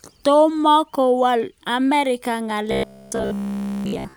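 From 2.71 s to the end, the speech turns into a rigid metallic buzz at 66.7 Hz. This is robotic sound from repeated short buffers, likely caused by audio arriving too seldom. All of it is repeats.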